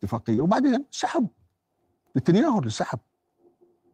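At 0.35 s the speech briefly smears, a short wobble lasting to about 0.39 s where the sound seems held rather than moving on. This is short concealed packet loss: about 20 ms of audio failed to reach the decoder in time, so the receiver filled the gap by extending the last sound, carrying its pitch forward if voiced or substituting shaped noise if not, before blending back into the real signal.

Overlapping the end of that smear, from 0.37 to 0.39 s, the sound turns rougher and grainier. This is a lost packet rebuilt from error correction. One 20 ms packet went missing, but the packet after it carried a low-bitrate copy, so the decoder played that copy instead of leaving a gap. Because the copy holds less detail than the original, those 20 ms come out coarser and noisier than the audio around them.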